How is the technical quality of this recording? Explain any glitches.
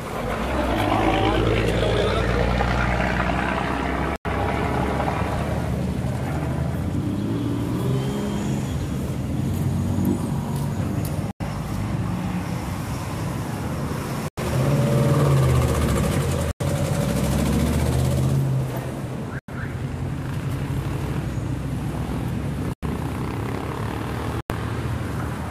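The recording is marred by seven dropouts to silence at 4.16–4.25 s, 11.27–11.40 s, 13.92–14.46 s, 16.33–16.61 s, 19.30–19.49 s, 22.59–22.83 s and 24.40–24.79 s. These are corrupt frames muted. Damaged compressed frames were rejected by the decoder and replaced with silence, so the sound cuts out abruptly for roughly 0.1 to 0.5 s each time, with the timing kept intact.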